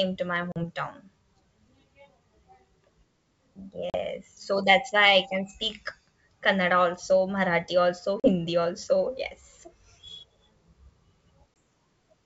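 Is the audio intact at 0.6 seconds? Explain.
No. Just after "to my", from 0.52 to 0.65 s, there is packet loss on an ADPCM call: about 40 ms, a couple of packets, drops to hard-edged silence. The decoder's adaptive predictor and step size lose track of the sender's, so the speech resumes slightly distorted before settling.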